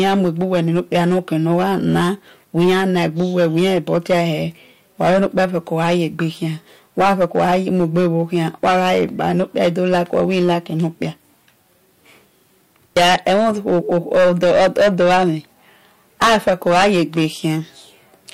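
Hard clipping runs through the whole speech clip. Overdriven by about 17 dB, roughly 7 percent of samples are cut flat, giving harsh fuzz on loud syllables.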